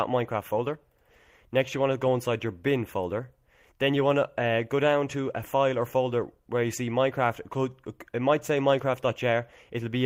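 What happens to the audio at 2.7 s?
Nothing goes wrong at 2.7 s; the audio there plays through intact, with no dropout, click or other disturbance.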